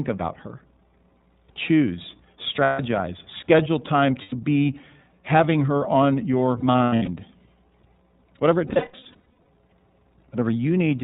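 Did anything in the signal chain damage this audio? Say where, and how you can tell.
Yes. At the codec stage, iLBC coding is plainly audible throughout. Nothing passes above 4 kHz, and the sound has a rough, synthetic edge from its independently coded 30 ms frames.

At the network stage, lost iLBC frames sound like held, buzzy vowels at 2.63–2.80 s, 4.22–4.35 s, 6.59–7.09 s and 8.67–9.48 s. The decoder repeats the last pitch cycle mixed with noise, and the voice is right again almost at once afterward.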